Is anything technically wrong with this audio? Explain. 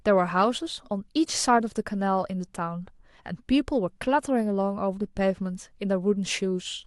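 No, nothing technical is wrong.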